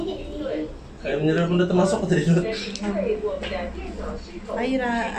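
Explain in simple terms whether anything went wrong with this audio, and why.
Nothing went wrong here: there are no glitches, dropouts or odd noises anywhere in the recording.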